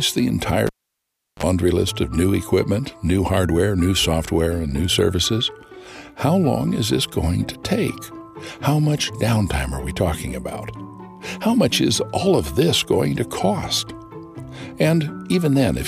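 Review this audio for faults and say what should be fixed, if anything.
A sharp pop at 0.67 s cuts the sound to near silence for about 0.71 s. A short 50 Hz mains buzz of roughly 32 ms follows, then a second pop as the sound returns at 1.43 s. This is a cable pulled and plugged in while live. The break drops the signal, and the brief buzz comes from the plug tip touching the socket before the ground connects. To prevent it, mute or power down the channel before changing any cable, and make sure connectors are seated firmly.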